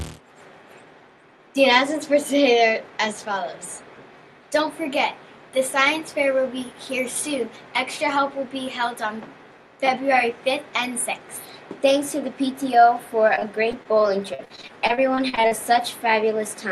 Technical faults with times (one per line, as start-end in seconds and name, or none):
13.35-15.59 repeated packet loss (robotic sound)